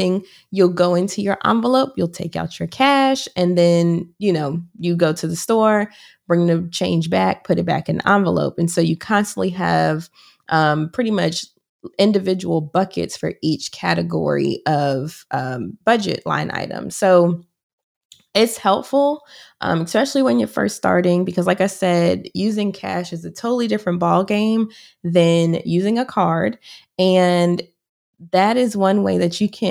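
Nothing technical stands out in this speech recording; every part of it sounds the way it should, with no faults to point to.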